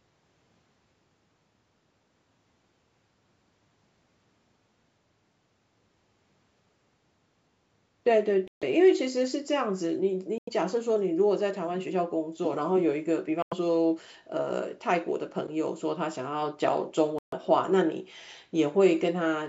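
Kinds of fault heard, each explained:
Bluetooth dropout: Audio packets most likely missed their deadline on the way to the headphones and were thrown away, leaving the output silent until usable packets arrived again. The speech has four brief holes, at 8.48, 10.38, 13.42 and 17.19 s, lasting about 0.16, 0.12, 0.11 and 0.16 s. After each gap the speech resumes further along, as though it had carried on playing unheard.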